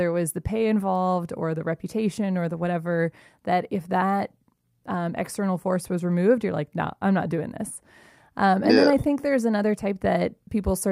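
Speech, with no audible technical faults found anywhere in the recording.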